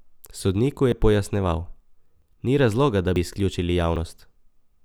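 Small forward jumps in the speech at 0.92, 2.22, 3.16 and 3.96 s, the longest skip at 3.16 s, are likely dropped buffers from overruns.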